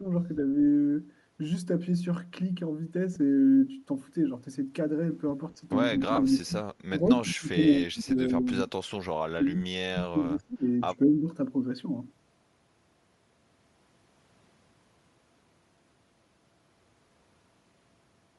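All the way through, the speech has a breathy, grainy edge and a thinned-out top end, which is most likely Bluetooth LC3 compression. The codec seems to be running at a bitrate that fits 48 kbps with 10 ms frames, emptying the upper spectrum and filling it with noise.

The speech suppression from double talk begins right at 0.0 to 0.04 s with a small dip of about 5 dB. It returns harder at 5.93 to 6.68 s (about 20 dB), 6.89 to 8.73 s (about 30 dB, the deepest), 9.25 to 10.65 s (about 25 dB) and 10.9 to 11.31 s (about 10 dB). The talker sinks and breaks up in pieces, and the likely cause is an echo canceller that turned everything down while both sides spoke.

There are lost LE Audio frames at 3.15 s and again at 6.16 to 6.18 s, inside that second suppressed stretch. The gaps are 10 ms and then 20 ms. The decoder patched each gap by repeating the last spectrum with scrambled phase, so each one is a brief noisy smear.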